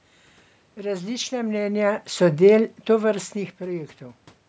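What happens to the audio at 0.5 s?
Nothing goes wrong at 0.5 s; the speech there is intact, with no dropout, click or distortion at that moment.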